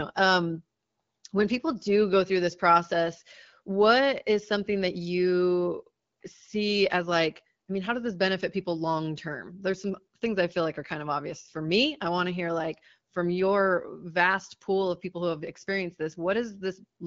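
Nothing goes wrong anywhere in this speech recording, which comes through an AMR wideband (HD Voice) link at 12.65 kbit/s, a rate where that codec's own coding marks stay light.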